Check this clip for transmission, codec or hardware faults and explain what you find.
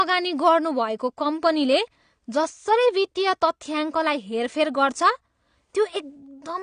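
One codec fault runs through the whole speech clip. Throughout, the speech sounds dull and smeared, with a fizzy, warbling edge on sibilants and nothing above about 9.7 kHz. This is likely AAC compression at a low bitrate, around 32 kbps, with the encoder discarding and coarsely quantising high-frequency content.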